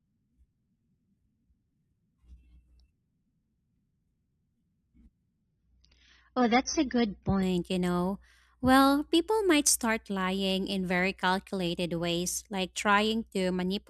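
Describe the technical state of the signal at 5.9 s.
At 5.9 s the speech loses its treble abruptly, with nothing above about 6.3 kHz and added codec artefacts, but no gap. This is an adaptive stream at a lower bitrate, running from 5.43 to 7.43 s: a slower connection pushed the player onto a leaner encoding, which points to a drop from around 96 to about 27 kbit/s.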